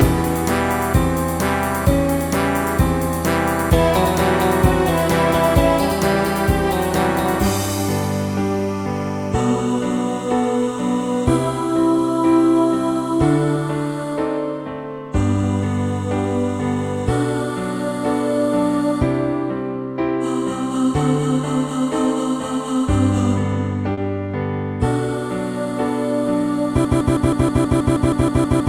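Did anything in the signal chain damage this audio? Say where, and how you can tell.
Yes. Short concealed packet loss at 23.93 to 23.99 s, a network-stage fault: about 40 ms of audio arrived too late for the decoder, which filled the gap by extending the preceding sound and crossfading back, leaving a brief smear or wobble.

Broken-record loop from 26.85 s to the end: a fragment of about 0.16 s repeats exactly, back to back, and the material that should follow never plays. This likely comes from a stalled playback or stream buffer that kept re-sending its last held block.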